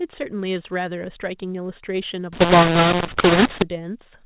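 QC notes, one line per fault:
2.33 to 3.62 s, mu-law and A-law mixed up: A-law bytes are decoded as mu-law. Levels land wrong, so the speech turns harsh and distorted.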